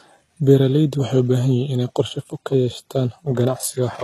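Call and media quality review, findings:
Low-bitrate audio saved at a high bitrate, throughout the speech. Hard ceiling, nothing above 12.4 kHz. First-encoding artefacts intact. Likely an HE-AAC encode around 16 kbit/s re-saved as high-rate MP3. Second pass restores nothing; it only enlarges the file.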